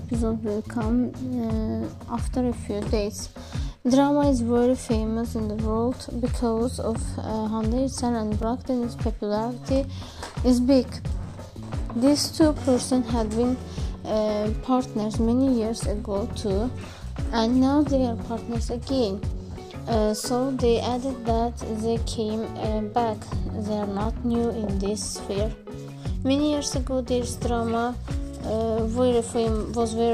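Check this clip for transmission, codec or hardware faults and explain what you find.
Two brief blocks of digital silence occur, at 8.43 s (4 ms) and 24.05 s (5.3 ms, fitting a 256-sample buffer). Samples dropped abruptly to silence, leaving flat gaps on the waveform with vertical broadband click lines on the spectrogram, heard as ticks.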